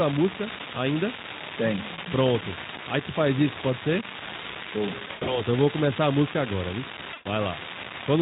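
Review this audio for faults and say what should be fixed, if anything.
One data line in the capture or transfer chain is marginal, so its unreliable data bit comes out wrong in a random share of samples across the whole clip. Every wrong bit adds a spike of the same size, which is heard as a steady crackle or fizz under the speech that carries on through the pauses as well. To prevent it, reseat or replace the faulty connection or cable, and check the interface's timing margins.

The speech was carried over VoIP, and packets were lost twice, with each gap covered by the speech codec's concealment. From 5.07 to 5.42 s, just before "eu vou começar a", about 160 ms is missing. The losses are spread over 200 ms, with the longest gap 100 ms, which fits roughly eight 20 ms frames. From 7.13 to 7.27 s, right after "a música agora viu", about 120 ms is missing. In both gaps the decoder extends its last pitch and filter while lowering the gain; the clip's Speex coding at 15 kbps is working normally. 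The sound turns into a stretched, buzzy tone or coloured noise that fades, and it stays weak for a short while after packets arrive again. To prevent it, give the call a larger adaptive jitter buffer, add forward error correction or packet redundancy, and prioritise voice traffic on the network.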